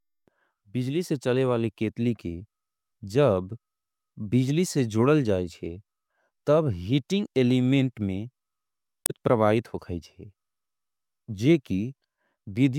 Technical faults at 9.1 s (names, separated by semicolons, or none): damaged data in a compressed stream